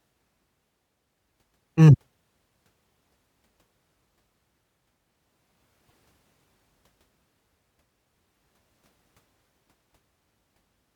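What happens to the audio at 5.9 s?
From 5.87 to 5.93 s the audio skips forward with a brief garbled stretch, likely a broken MP3 bit reservoir: after dropped frames, the next 26.1 ms frames read wrong reservoir bytes.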